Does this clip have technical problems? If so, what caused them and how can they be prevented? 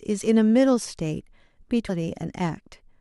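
Yes. At 1.88 s the speech jumps abruptly forward with a brief blip, which is likely a stream segment skipped: one chunk of the segmented stream failed to arrive, and the player went on to the next, so that stretch of programme is gone. Larger client buffering with retries before advancing would prevent it.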